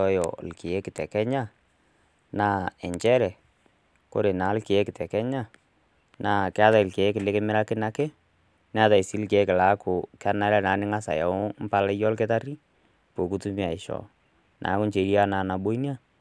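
No technical faults can be heard in this recording.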